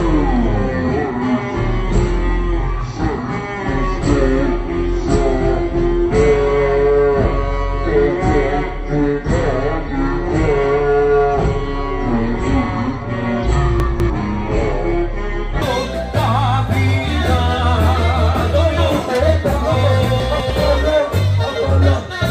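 From the start to 15.62 s the sound plays at 0.533 times its proper speed, so pitch falls together with tempo, about ten semitones lower and slow. The likely cause is a section at the wrong speed, played against the wrong clock. Because the pitch and tempo change together, it is not a pitch shift on its own.

At 13.8 to 14.1 s, still inside the slowed part, and again at 20.2 to 20.5 s, chunks are out of order. A 100 ms chunk plays two chunks late, so the sound jumbles across three hard joins. Nothing is missing, which sets it apart from a dropout or gap.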